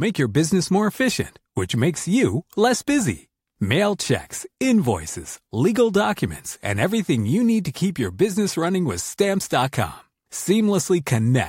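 Listening closely to this speech recording, nothing stood out as a technical problem.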